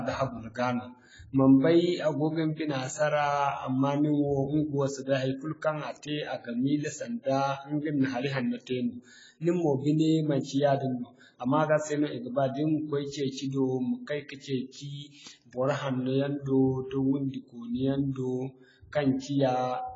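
Throughout the speech, heavy AAC compression, likely low-bitrate AAC-LC around 16 kbps, removes everything above 7.6 kHz, leaving dull, smeared sibilants with a warbling, fizzy texture.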